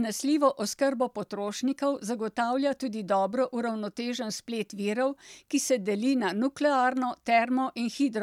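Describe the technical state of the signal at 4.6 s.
At 4.6 s the speech signal is intact, with no audible dropout, distortion, glitch or other fault at that moment.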